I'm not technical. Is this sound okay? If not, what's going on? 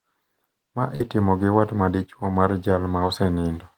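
No. A burst of packet loss at 0.95 to 1.02 s dropped some audio, so the sound briefly holds and fades, then skips ahead to "itimo gi wat madichuo".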